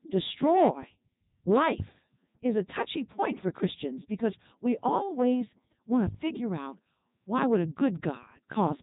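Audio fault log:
throughout, Codec 2 vocoder: the speech comes out robotic and buzzy because the decoder rebuilds it from sine waves driven only by pitch, voicing, energy and a coarse spectral envelope, so the original waveform is gone. The damage is heavy, even at the top 3.2 kbit/s mode. On a spectrogram, harmonics appear as clean synthetic stripes with smeared formants and nothing above 3.8 kHz. The waveform looks regular and periodic rather than natural.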